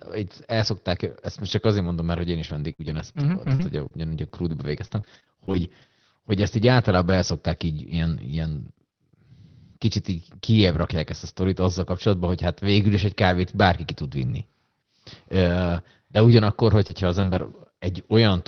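From 2.43 to 5.84 s there's repeated packet loss, with a robotic, choppy sound: twelve short holes, the longest 53 ms, each patched by stretching the last sound, roughly half a second reworked overall. Near the end, short concealed packet loss at 16.88–16.91 s and 17.21–17.25 s, where the decoder extends the previous sound, gives brief smears. Alongside those, there's a lost packet rebuilt from error correction at 16.89, 17.23, 17.27, 17.33 and 17.37 s, each a 20 ms stand-in decoded from a low-bitrate backup copy, so no gap, just a rougher, grainier patch under the call's roughly 6 kHz ceiling.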